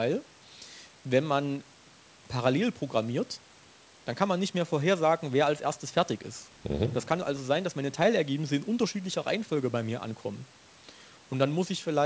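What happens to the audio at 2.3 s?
Nothing goes wrong at 2.3 s; the speech there carries on intact, with only the normal bandwidth limit of wideband telephone coding.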